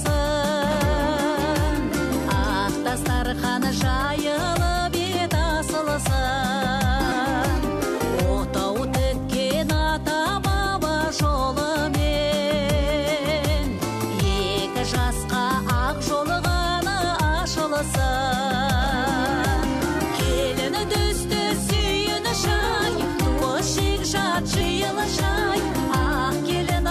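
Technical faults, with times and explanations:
23.41 s and 24.59 s, compressed frames skipped: at each time the sound lurches forward, losing roughly 150 ms at the first point and roughly 100 ms at the second. Whole blocks of the compressed stream were never played, either missing or rejected by the decoder as damaged. The jumps fit about seven and four frames of 23.2 ms each.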